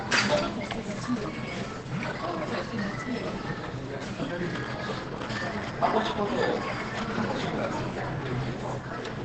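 From start to finish the signal has likely passed through Opus compression at a very low rate, heavy enough to push the encoder into its speech-oriented SILK mode with a wideband limit. The sound is dull and muffled, with nothing above roughly 8 kHz, and its textures come out hoarse. That pattern fits a bitrate around 12 kbps, where SILK models everything as if it were a voice and smears whatever does not fit that model.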